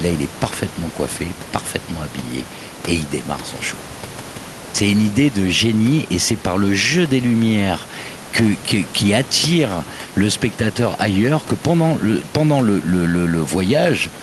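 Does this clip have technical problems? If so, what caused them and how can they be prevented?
No, no technical faults are present.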